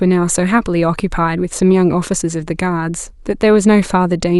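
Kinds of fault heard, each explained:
No technical faults can be heard in the speech: the signal stays continuous and steady, with nothing that points to trouble in capture, processing or transmission.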